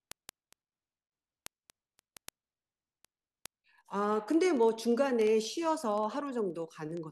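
A speech clip carrying word clock ticks from about 0.12 s to 7.09 s: sharp, uneven ticks roughly every twentieth of a second, around a hundred in all. The steady rate, not random timing like dropouts or crackle, points to an unlocked digital link with clocks drifting apart by roughly 400 ppm, each slip losing or repeating one sample.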